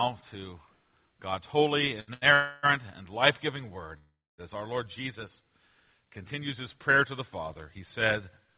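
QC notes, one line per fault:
2.00–2.10 s and 2.13–2.25 s, short stall from a late packet: sound held about 74 ms then 80 ms, with a slight buzz or dip, while the jitter buffer ran dry, then resumed with nothing lost.
2.34–2.66 s, call audio freeze: a fading buzz replaces the sound for about 0.29 s, likely packets held up and an empty jitter buffer, then playback resumes where it stopped.
3.98–4.41 s, call audio freeze: a decaying buzz drops to silence for about 0.27 s of the 0.4 s gap, likely a longer network hold-up, then the audio continues intact.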